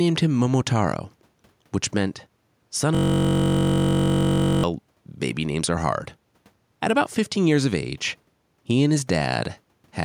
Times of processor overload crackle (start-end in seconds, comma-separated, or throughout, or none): none